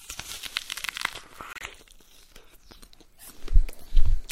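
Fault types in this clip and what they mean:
Corrupt frame decoded: from 1.52 to 1.63 s, a few damaged compressed frames were played anyway, their garbled data throwing a brief chirpy burst peaking around -25 dBFS into the wrong frequencies. Unlike a dropout, it adds foreign noise instead of leaving a gap.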